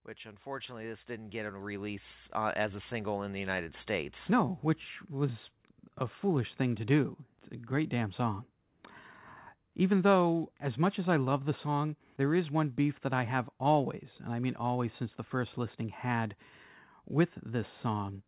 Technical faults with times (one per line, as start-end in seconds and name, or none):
0.22-4.19 automatic gain rising